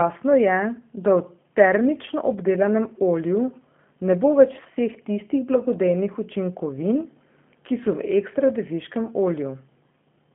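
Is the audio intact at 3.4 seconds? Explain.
No. G.729 codec damage runs through the whole clip. Speech is rebuilt from a filter and sparse pulses, which fits 8 kbit/s. It sounds rough and synthetic, with nothing above 3.8 kHz.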